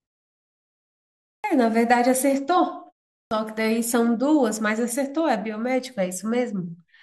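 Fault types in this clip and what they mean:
clipped start after a pause: The output device drops into a low-power state during silence and must wake and resynchronise before it passes audio again, so the opening of the next sound never reaches the listener. Speech resumes at 1.40 s after a 1.4 s pause with about 40 ms missing, and again at 3.27 s after only 0.43 s of silence with about 42 ms gone. Both entries snap in abruptly, their first sounds cut off.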